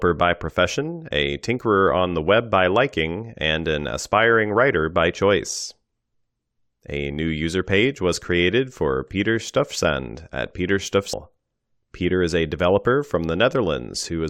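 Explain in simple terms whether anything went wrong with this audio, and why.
A stream segment was likely skipped at about 11.12 s. Streamed audio arrives as a series of short chunks, one after another. Here one chunk appears to have failed to arrive, and the player moved straight on to the next one rather than stopping to wait. To a listener, the speech suddenly jumps ahead at that moment with a tiny blip, as if a piece of the recording had been snipped out.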